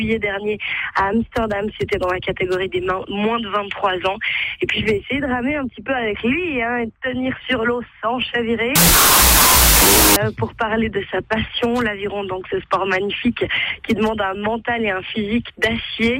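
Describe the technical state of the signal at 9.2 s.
At 9.2 s the signal is inside a wrong sample width fault running from 8.76 to 10.16 s. The sound fits 32-bit float data read as 16-bit integers. Loud noise buries the original, which plays at half speed, an octave low. The waveform jumps sharply in level, and a spectrogram shows dense broadband noise across all frequencies.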